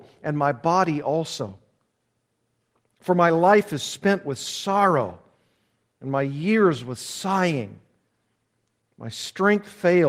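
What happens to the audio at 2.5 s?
Nothing goes wrong at 2.5 s: the speech there is intact, carried through the Opus voice compression at about 24 kb/s with only the light coding texture it gives the whole clip.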